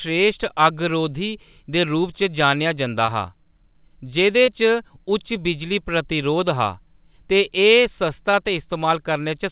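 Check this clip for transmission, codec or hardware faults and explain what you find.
Three short concealed packet losses occur in this speech, at 3.06 to 3.10 s, 4.46 to 4.49 s and 8.31 to 8.35 s. The band-limited sound, with nothing above 4 kHz, fits a G.711 A-law call path. In each case about 20 ms of audio failed to arrive in time. The receiver extended the preceding sound for its pitch or noise texture, then crossfaded back. The result is a brief smear or wobble rather than silence. A hard dropout would leave a gap, and a plain click would add a sharp transient.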